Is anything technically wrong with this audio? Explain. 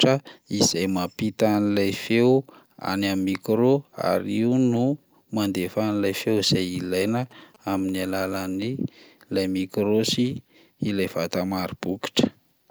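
Yes. From 6.13 s to 8.27 s there are GSM signalling bursts, the interference from a nearby 2G phone exchanging short control transmissions with its network. Some part of the audio circuit rectifies the RF envelope, so the bursts appear as a galloping dit-dit-dit of brief buzzes repeating at about 217 Hz. They sit around 30 dB below the speech.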